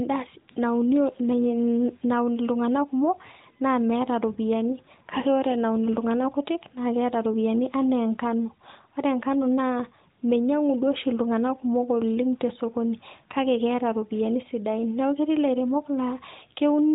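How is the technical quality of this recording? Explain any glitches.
No glitches or faults heard.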